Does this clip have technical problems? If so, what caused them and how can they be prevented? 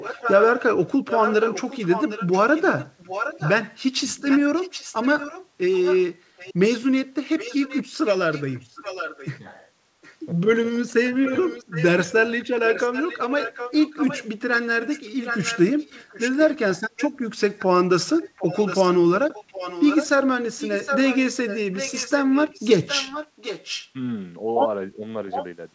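Yes. The first is an echo leak: a delayed copy of the speech trails the talker by 763 ms, sitting about 10 dB below it, from 0.0 to 10.15 s, again from 11.26 to 23.9 s, and briefly at 25.31 to 25.46 s. The likely cause is a far end running on a loudspeaker, where the echo canceller didn't fully remove what its mic picked back up, so that residue got sent back down the line. The fix is a headset on that end, or a properly tuned echo canceller with the speaker volume turned down.

The second is speech suppressed in double talk. At 11.06 to 11.31 s the talker's level dips hard, around 15 dB at its deepest, and at 24.94 to 25.04 s there's a smaller dip of a few dB. That's likely the echo canceller hearing both sides at once, failing to tell the local talker from the loudspeaker echo, and pulling both down together. The whole band here stops around 8 kHz, which comes from the G.722 call path. 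A headset on the far end would prevent this as well, since with no echo left to fight the canceller stops clamping down during overlapping speech.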